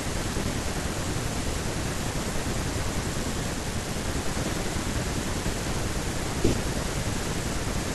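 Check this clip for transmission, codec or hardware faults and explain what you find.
No transmission, codec or hardware faults can be heard in the speech; the signal stays continuous and stable throughout, with nothing that points to a fault in the chain that carried or recorded it.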